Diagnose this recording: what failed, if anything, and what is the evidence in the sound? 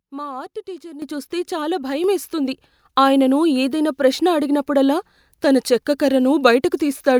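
Speech and background jump louder together at 1.02 s (about 11 dB) and 2.04 s (about 4 dB): microphone volume stepped up by call-processing input gain control.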